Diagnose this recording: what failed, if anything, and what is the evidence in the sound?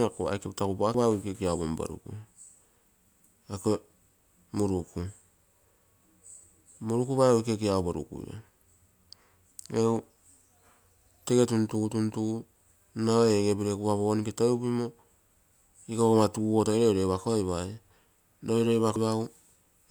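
Damaged data in a compressed stream: quick glitches at 0.94–0.98 s and 18.96–18.99 s, where the decoder hit corrupt frames, lost sync and jumped to the next header.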